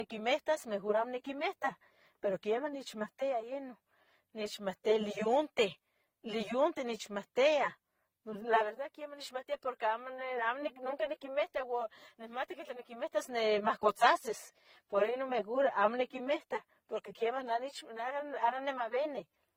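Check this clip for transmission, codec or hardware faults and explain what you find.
Yes, one fault runs through the whole speech clip.

Transcoding between lossy codecs, throughout: the speech likely passed through AAC, then Opus, then AAC again. Their artefacts stack, and nothing remains above 17.8 kHz.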